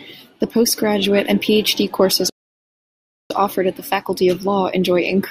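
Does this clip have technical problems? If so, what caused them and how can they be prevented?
Yes. The player likely ran short of buffered data, or its audio thread was blocked, so this speech clip produces a playback stall: the sound cuts to silence from 2.30 to 3.30 s, about one second, then resumes at "offered at the". A larger playback buffer and a non-blocking audio thread prevent this.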